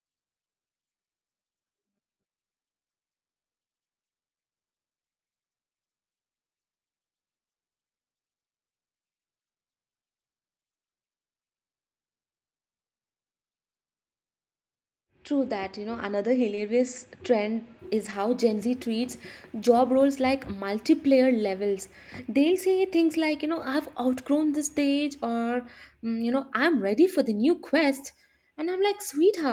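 At 16.55 to 16.59 s the speech briefly smears, a wobble lasting a few hundredths of a second. This is short concealed packet loss: 20 ms of audio arrived too late for the decoder, so about 15 ms was filled by extending the preceding sound before blending back into the real signal.

Overlapping the end of that smear, at 16.57 to 16.59 s, the sound turns rougher and grainier for 20 ms. A second stretch, from 17.97 to 18.11 s, holds 80 ms of rebuilt audio. Both are a lost packet rebuilt from error correction. Opus in-band forward error correction is active on this call, which sounds like 8 kHz-bandwidth Opus at a modest bitrate. The copies carried by the following packets fill both stretches with no gap, but at lower quality. The first stretch matches a single 20 ms frame, and the 80 ms fits four separate ones.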